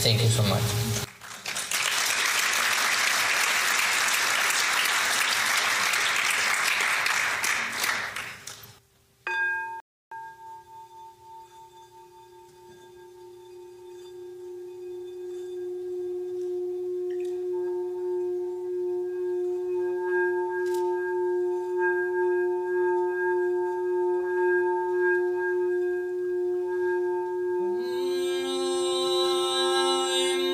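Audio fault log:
9.80 to 10.12 s, rebuffering stall: the sound drops to silence for about 314 ms. Playback ran dry, waited for data, then resumed exactly where it stopped.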